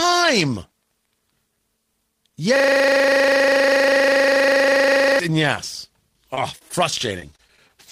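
This speech clip contains a system hang loop from 2.56 to 5.19 s, ending just before "and yes": the system froze while the sound hardware kept replaying the same 40 ms stretch of its buffer, so one short fragment repeats exactly, 66 times at 25 Hz, in place of the speech. Repeated packet loss (robotic sound) follows "and yes" from 6.34 to 7.70 s: twelve holes, the longest 24 ms and about 160 ms missing in all, were each patched by extending the preceding sound, leaving choppy, robotic speech with pieces missing.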